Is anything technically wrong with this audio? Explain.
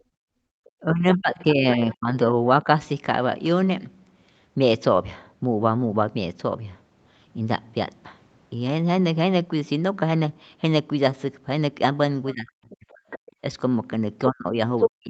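Yes. The speech is marred by echo-canceller faults: the background is gated, the talker is suppressed during double talk, and the far-end voice leaks through. All of this sits on audio whose content stops at 8 kHz, which fits a wideband call codec such as Opus at a modest bitrate and is normal for a call path.

Background gated by the echo canceller: from 0.00 to 0.54 s the room sound drops sharply, by about 32 dB, for roughly half a second before recovering. A shorter dip of about 24 dB occurs from 13.32 to 13.41 s. The canceller's suppressor clamps the microphone while it believes loudspeaker output is present. The ambience therefore falls away abruptly and returns when the suppressor releases, which gives a pumping, gated effect.

Speech suppressed in double talk: the talker's level collapses from 0.82 to 2.67 s, with drops of around 20 dB totalling about a second. It collapses again from 12.33 to 13.04 s and from 14.29 s to the end, and in those two stretches the drops reach around 40 dB. 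The likely cause is both sides speaking at once. Unable to separate near-end speech from echo, the canceller attenuates everything, so the voice dips and cuts out in pieces.

Other side's voice leaking through: a second voice is audible from 12.30 to 12.73 s, roughly 25 dB below the talker. It returns from 13.10 to 13.19 s at roughly 15 dB down, and from 14.78 to 14.89 s at about the same level as the talker. This is likely residual echo that the canceller failed to remove from the microphone signal. It appears as short scraps, the first and last of which overlap the suppressed speech around them.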